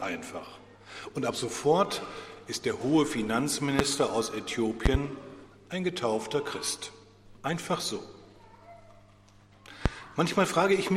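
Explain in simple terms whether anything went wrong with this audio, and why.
Loud pops break into the audio three times: a single one at 3.79 to 3.82 s, a quick double pop at 4.86 to 4.97 s, and another single one at 9.86 to 9.89 s. Each is a sharp jolt that stands well above the surrounding sound, which carries on underneath. The likely cause is a sudden electrical spike, such as from a plug, a switch or static, briefly added to the signal.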